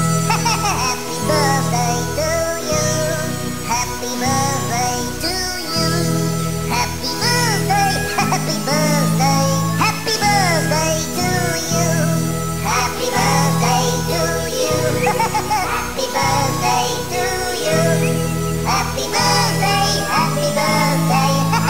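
A stuck bit runs throughout, giving harsh, buzzy distortion and pauses filled with noise near -30 dBFS, likely from one data bit held fixed.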